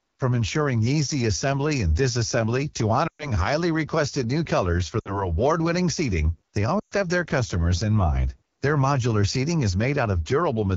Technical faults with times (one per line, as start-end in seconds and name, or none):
0.00-10.77 AMR wideband (HD Voice) codec
3.07-3.31 lost AMR speech frames
4.99-5.27 lost AMR speech frames
6.79-6.94 lost AMR speech frames